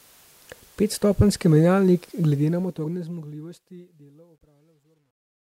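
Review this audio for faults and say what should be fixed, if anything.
From 2.23 s to 5.56 s the speech carries truncation distortion on a fade. The fade-out starting around 2 s keeps too few bits without dither, which fits an 11-bit word length, so the quietest stretch from 3.8 s to 5.57 s turns into gritty steps. Unlike a noise gate's chatter, the grain tracks the falling level itself and worsens steadily toward the end. Render fades at full resolution and apply dither when reducing word length.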